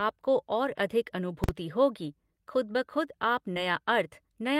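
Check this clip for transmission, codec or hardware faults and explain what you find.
Two faults turn up in the speech. From 1.44 to 1.49 s, just before "होगी खुद ब खुद", invalid numbers at full scale: a calculation produced infinite or invalid values that clamped to the maximum sample value, pinning about 46 ms of output at one extreme, which fits a 2048-sample processing block. It sounds like a loud bang. On a waveform it is a flat slab at one extreme, far beyond the speech peaks; a spectrogram shows bright vertical lines at its edges.

From 3.53 to 3.58 s, right after "खुद ब खुद आप", short concealed packet loss: about 20 ms of audio never arrived, and the decoder filled roughly 23 ms by extending the preceding sound before blending back. It is heard as a brief smear.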